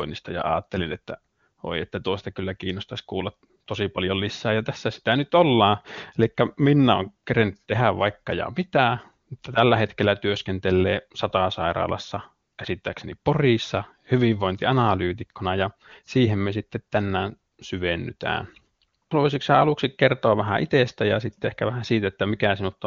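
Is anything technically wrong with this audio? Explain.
No technical faults are audible.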